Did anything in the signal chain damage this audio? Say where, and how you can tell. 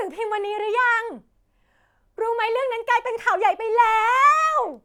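No, nothing in the chain audibly damaged this speech, and no stage can be pinned as a source of trouble.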